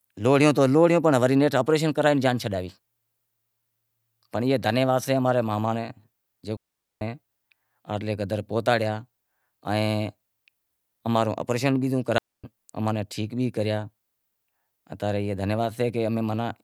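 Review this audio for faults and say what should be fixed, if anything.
The speech has two digital wireless dropouts. At 6.57 to 7.01 s the sound drops into near silence for about 0.44 s. At 12.18 to 12.44 s, after "اماں رو اپریشن بیزوں" and before "اماں نیں", it mutes for about 0.26 s. Each time the receiver lost too much data and muted cleanly, with no noise burst on either side. Keep the transmitter in clear line of sight and choose a cleaner frequency.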